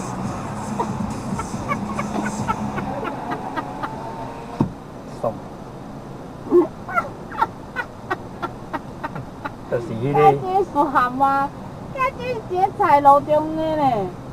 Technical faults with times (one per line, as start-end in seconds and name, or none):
9.15-9.20 compressed frames skipped
10.75-10.79 compressed frames skipped